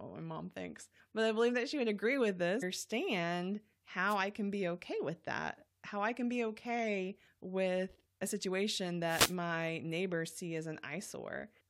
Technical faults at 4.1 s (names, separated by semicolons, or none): wireless microphone noise hit